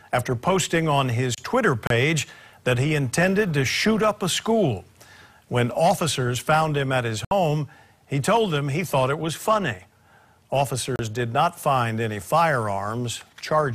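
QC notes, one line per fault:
1.87–1.91 s, 7.25–7.32 s, 10.96–11.00 s: digital broadcast dropout. The receiver muted on bad frames, leaving 32, 64 and 32 ms holes that fit one, two and one lost frames. Waveform drops to silence, and the spectrogram shows clean full-band vertical gaps.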